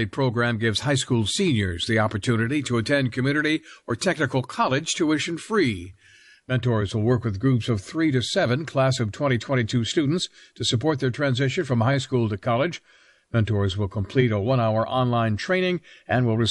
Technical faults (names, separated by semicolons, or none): MP3 compression; pre-echo